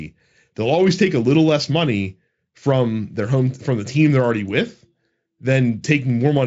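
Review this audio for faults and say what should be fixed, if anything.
Nothing needs to be fixed, as the audio shows no faults.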